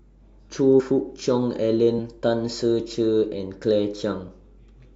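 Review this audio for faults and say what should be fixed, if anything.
At 0.79 to 0.81 s the speech jumps forward, and about 50 ms of sound simply never arrives. These are compressed frames skipped: around two whole frames of the encoded stream were either missing from the file or rejected by the decoder as damaged, so playback resumed further along. To prevent it, verify file integrity after transfer and re-encode or re-fetch from an intact source.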